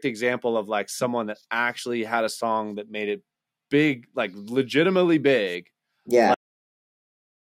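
A speech clip with a cut-off end: at 6.34 s the audio stops mid-sound and falls straight to digital silence, because the final buffers were never written out.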